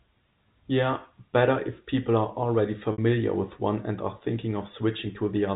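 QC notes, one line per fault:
2.92 to 2.98 s, packet loss with pitch repetition: right after "if people are already", the sound briefly hangs on a held, slightly buzzy tone before "with one and are" resumes. About 60 ms of audio went missing, which fits three 20 ms packets. The receiver bridged the gap by looping the last pitch period and letting it fade, so the hole becomes a short sustained buzz rather than silence, heard through the narrow telephone band of the G.711 A-law line.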